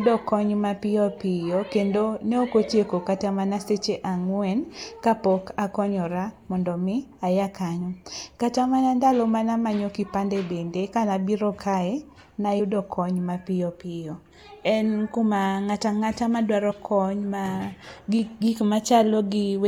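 At 7.80 s, 12.59 s and 16.70 to 16.72 s, damaged data in the compressed stream makes the decoder misread frames and lose sync, leaving brief glitches in the speech.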